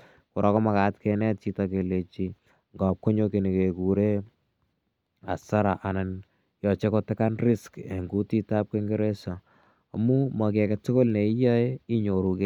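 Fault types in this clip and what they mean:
Nothing stood out on listening to this speech recording.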